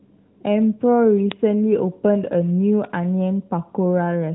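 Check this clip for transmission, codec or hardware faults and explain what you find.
Two isolated bit error spikes are in this speech, at 1.32 s and 2.85 s, heard through a narrowband mobile codec path whose band stops near 3.9 kHz.

Bit error spikes at 1.32 s and 2.85 s: a single flipped bit throws two or three consecutive samples to a value a power of two away before they snap back. Each is a brief, broadband tick that bears no relation to the surrounding sound.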